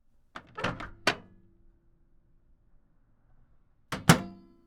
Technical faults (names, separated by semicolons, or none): de-emphasis applied wrongly